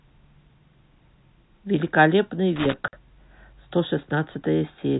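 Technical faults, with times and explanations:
2.56–2.74 s, loose connector crackle: a worn or dirty contact in the signal path was making and breaking as it shifted, chopping the speech on and off, so it comes through as an irregular scratchy burst lasting under two tenths of a second.
2.88–2.93 s, packet loss filled with silence: a run of packets went missing and the receiver played silence in their place, leaving a 50 ms hole with hard edges, a gap consistent with five consecutive 10 ms packets.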